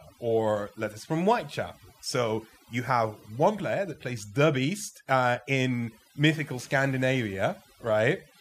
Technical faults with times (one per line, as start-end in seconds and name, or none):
0.00-8.41 overdone noise removal